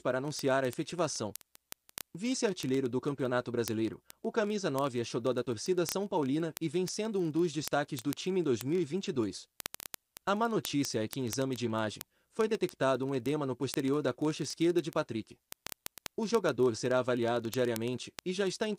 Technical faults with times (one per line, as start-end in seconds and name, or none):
0.11-18.78 word clock ticks